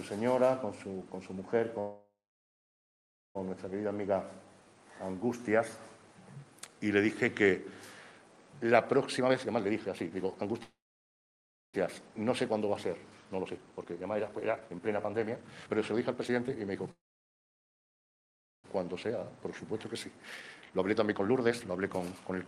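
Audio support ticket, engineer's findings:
Audio stalls, last sound held as a fading buzz/hiss, then silence, resumes where it left off, nothing lost. Call audio freeze at 1.79–3.37 s (about 1.2 s silent), 10.63–11.76 s (about 0.97 s silent), 16.91–18.66 s (about 1.65 s silent). Likely cause: delayed packets draining the jitter buffer, receiver extending the last audio until arrival. Latency grows by each gap length.

Sound rushed, same pitch, faster pacing. Jitter buffer speed-up at 9.19–10.62 s (147% speed, roughly 0.7 s trimmed), 11.87–16.91 s (134%, roughly 1.5 s) and 18.77–22.48 s (133%, roughly 1.5 s). Buffer overfilled beyond target. Receiver cutting short pitch-period slices back to back to recover target delay.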